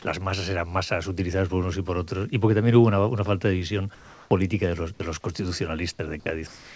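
From 3.95 to 4.31 s, and again from 6.47 s to the end of the clip, comfort noise replaces the background. The pause was likely not transmitted, and the receiver filled 360 ms and then 293 ms with synthetic noise. The background sits about 26 dB and about 23 dB below the loud passages, and the filler drops it by a further 2 dB or so. It is a smooth, featureless hiss. On a spectrogram, the textured background gives way to an even, uniform wash. The waveform shows a slightly thinner, unnaturally steady band.

At 5.97 to 5.99 s, the onset is clipped by the voice detector. The detector was likely slow to register that sound had resumed, so the first 20 ms were replaced with comfort noise. The sound begins abruptly, without its soft attack. The waveform jumps up abruptly, and the spectrogram shows a hard vertical edge where a gradual build would be.

Throughout the clip, the spectrum stops at 8 kHz, which fits a G.722 call path at 64 kbps.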